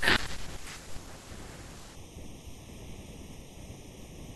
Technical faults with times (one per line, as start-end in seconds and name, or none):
1.95-4.36 channel delay (comb filtering)